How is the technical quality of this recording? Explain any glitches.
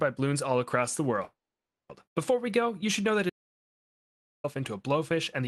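Two faults interrupt the recording, which has passed through a call codec whose top end stops around 12 kHz, consistent with Opus at a modest bitrate.

Call audio freeze, 1.23 to 1.91 s: the sound stalls, with a brief fading continuation of the last sound giving way to about 540 ms of silence. The likely cause is packets held up in transit, emptying the jitter buffer. Nothing is lost, but everything after runs about 0.66 s late.

Audio dropout to silence, 3.30 to 4.44 s: the sound cuts out abruptly into silence, with no room tone, for about 1.14 s, then returns mid-flow. The input was likely lost while recording continued writing silence, so that stretch of audio is gone.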